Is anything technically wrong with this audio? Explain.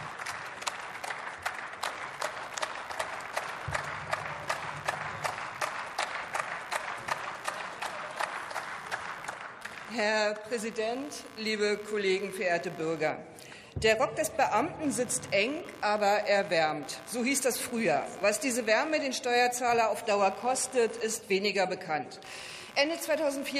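Yes. Computer activity noise runs through the whole clip. The computer's processor, graphics card or mouse draws current in bursts, and those load changes shift the ground shared with the audio circuit, so the activity leaks in as an electrical signal. It is heard as a chirping buzz pulsing at around 70 times a second, roughly 20 dB below the sound. It follows the machine's activity rather than anything in the audio itself.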